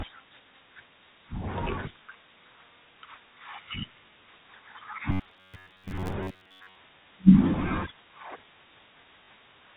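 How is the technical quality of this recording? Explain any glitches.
The recording has two audible glitches in the speech, both in the second half of the clip, heard through a telephone-band G.711 channel whose coding leaves nothing above 4 kHz and at most a faint noise floor.

From 5.12 to 6.76 s the speech turns into a rigid, metallic buzz pinned at about 94 Hz, still loosely tracing the words. This is robotic sound from repeated short buffers, likely because new audio arrived too seldom and a stretch of about 10.7 ms was replayed to fill the gaps, while most of the real audio in that span was skipped. Repeating a fixed-length buffer imposes a pitch of one over its length.

At 9.24 s a short robotic stutter lasts 40 ms. This is packet loss with the last packet repeated: audio went missing and the receiver kept replaying the final packet it had until fresh audio arrived. The length fits two lost 20 ms packets, giving a brief 50 Hz buzz.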